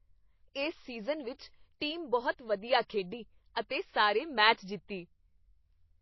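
MP3 compression is audible throughout the speech, with its damage plainly apparent from start to finish. Nothing comes through above about 5.8 kHz, so the treble sounds dull and s sounds lose their edge. The likely cause is a low-bitrate MP3 encode, which fits a rate around 24 kbps. Short of bits, the encoder cuts everything above that fixed frequency and discards weak frequency lines that flicker on and off between frames, leaving a watery, swirling texture and smeared onsets.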